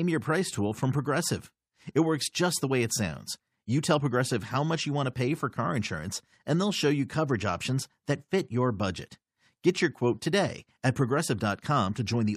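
Nothing stood out as a technical fault on listening to this speech recording.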